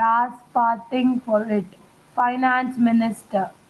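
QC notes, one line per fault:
Throughout, gain pumping: the gain swings by around 10 dB, so soft and loud passages end up close in level and the speech sounds squashed and flattened. The likely cause is a microphone gain set far too high, with a fast limiter or compressor pulling it down on every loud sound; the Opus call path's own coding noise sits underneath this.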